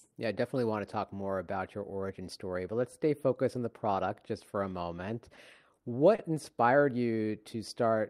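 At 5.35 to 5.39 s and again at 5.75 to 5.79 s, both just after "just for a moment", then at 6.15 to 6.20 s, the speech shows a short stall from a late packet. Each time the jitter buffer ran dry and the receiver held the last sound for 20, 20 and 30 ms, then resumed where it left off. Nothing is lost, but each sound is drawn out, and total delay grows by 70 ms.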